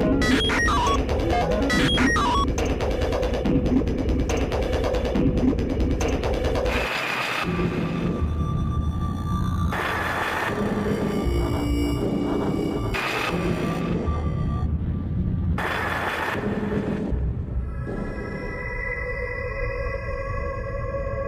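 No technical faults can be heard anywhere in the recording.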